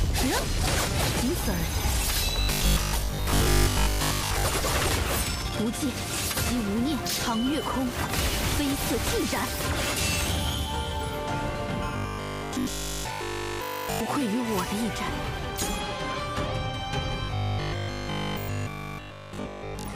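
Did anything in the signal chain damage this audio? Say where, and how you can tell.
Yes. Robotic sound from repeated short buffers at 2.41–4.45, 11.97–14.01 and 17.25–19.95 s: a fixed 50 Hz buzz, likely a driver buffer looping 20 ms chunks, showing as rigid harmonic bands on a spectrogram.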